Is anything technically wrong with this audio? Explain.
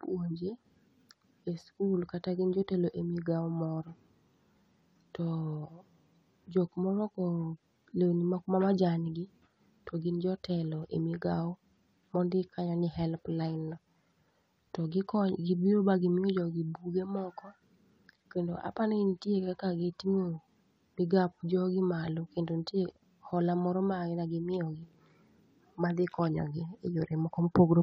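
No, nothing technically wrong stood out on listening to this speech recording.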